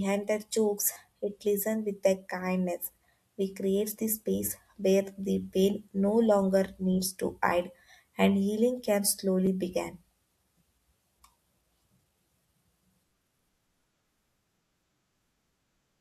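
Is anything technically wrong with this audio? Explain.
Yes. At 0.93 to 0.96 s, between "their jokes" and "it listen with their", and again at 9.46 s after "hide and healing can", a repeated buffer occurs. Audio arrived late, so a 10 ms piece replays, three extra times then once, giving a brief buzzy stutter and click that loses about 30 ms and 10 ms of audio.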